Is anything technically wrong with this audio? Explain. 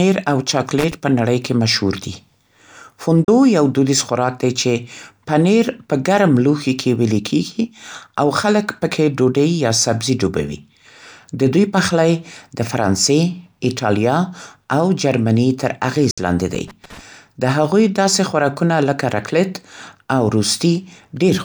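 Yes. The speech contains two kinds of fault, each occurring twice.

Loose connector crackle appears from 0.79 to 0.92 s and again from 16.55 to 17.01 s. A worn or dirty contact is intermittently making and breaking as it shifts, so the signal is chopped into fragments and any DC on the line turns each break into a small pop. You hear irregular scratchy bursts layered over the speech. Unlike a dropout, the sound is not replaced by silence. It is roughened and noisy.

A digital broadcast dropout occurs at 3.24 s, muting about 32 ms, and at 16.11 s, muting about 64 ms. Each time, the receiver stopped getting usable frames and muted until good ones returned. The lengths fit one and then two lost frames of roughly 32 ms each. The audio fades out in about 3 ms, leaves a clean, quiet hole, and then resumes. Whatever was transmitted during the gap is simply missing, with no crackle involved.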